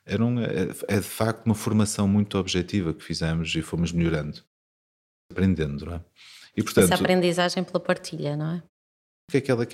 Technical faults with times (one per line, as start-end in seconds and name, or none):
4.97-5.31 clipped start after a pause
8.94-9.29 clipped start after a pause